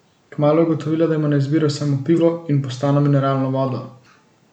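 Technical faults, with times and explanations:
2.18–2.20 s and 3.67–3.70 s, corrupt frame decoded: flipped bits in a few compressed frames were decoded rather than concealed, so misread gains and spectral codes put energy at the wrong frequencies for just those frames. The first, between "ima na izbiro samo" and "in postano mineralno", is a loud glitch peaking around -10 dBFS. The second, just after "in postano mineralno", is a slightly longer, quieter glitch near -20 dBFS.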